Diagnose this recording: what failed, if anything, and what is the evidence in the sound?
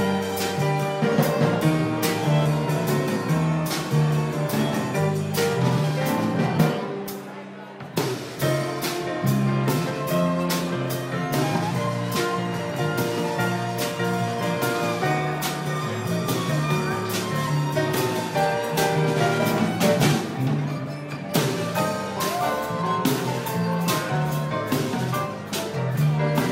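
No audible faults detected.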